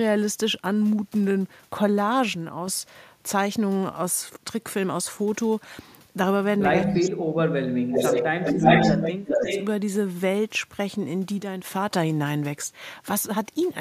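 From 2.33 to 2.68 s and again from 11.40 to 11.64 s, the level falls abruptly by 6 dB, likely one channel drops out before the mono sum. Between 6.87 and 9.45 s the speech repeatedly dips or cuts out: by roughly 35 dB from 6.87 to 8.13 s, roughly 15 dB from 8.50 to 8.78 s, and roughly 35 dB from 8.96 to 9.45 s. This is likely speech suppressed in double talk, with the echo canceller attenuating the near talker while the far side speaks. Overlapping this, delayed copies of the voice return. From 6.94 to 7.01 s a scrap arrives 246 ms late at about 15 dB below the speech. From 7.96 to 9.11 s and 9.27 to 9.65 s the copy arrives 347 ms late at about 5 dB above and then level with the speech. This is likely echo leak from a loudspeaker-side canceller.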